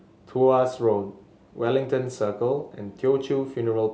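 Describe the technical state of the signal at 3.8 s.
At 3.8 s the speech signal is intact, with no audible fault at that moment.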